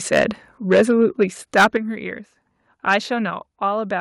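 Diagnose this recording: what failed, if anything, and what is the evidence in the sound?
The loudest stretches of this speech take on a harsh, crackling edge at 0.13 to 0.24 s, 0.71 to 1.24 s, 1.56 to 1.77 s and 2.89 to 2.95 s. The worst is around 1.6 s, where a noticeable share of the waveform is flattened. This is microphone overload at the converter stage. The input gain was likely set so high that peaks ran about 9, 7, 11 and 4 dB past full scale, and their tops were sheared off.

The level drops abruptly three times: about 2 dB at 0.78 s, about 6 dB at 1.77 s and about 4 dB at 3.30 s. Voice and background fall together, and two of these drops land inside or right at the end of a distorted passage. The pattern points to the microphone volume being stepped down by call processing. The software's gain control likely detected the overload and cut the device input in single steps.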